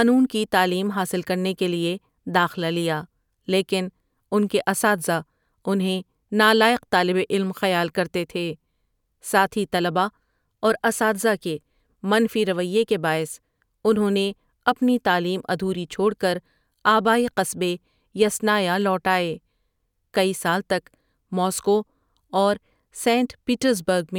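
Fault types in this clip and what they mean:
No technical faults can be heard anywhere in the speech recording, and the signal stays stable and intact throughout.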